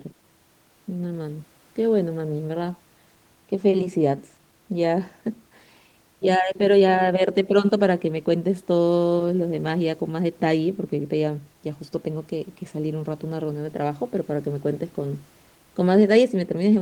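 No technical faults are audible.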